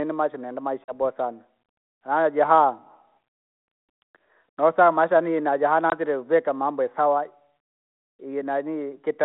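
At 0.85 s, just after "maisha nenda", packet loss on an ADPCM call cuts a hard-edged gap. About 40 ms of audio is gone, roughly two packets. The decoder's predictor and step size lose track of the sender's. So the speech comes back with slight distortion, then settles. At 5.90 s, after "nosama maisha yaani najaha", a shorter 20 ms hole follows. That is about one packet. The speech resumes at "vika mambo isawa" slightly distorted.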